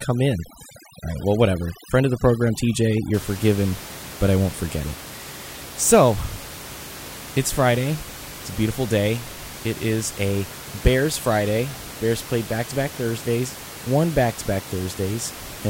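From the start to about 3.14 s, just before "forgiven but I won't", the background drops to near silence flecked with twinkling specks. This is overdone noise removal: an over-aggressive reduction pulls bands near the noise estimate almost to zero, taking the quiet parts of the speech with them. Afterwards the room noise sits about 15 dB below the speech.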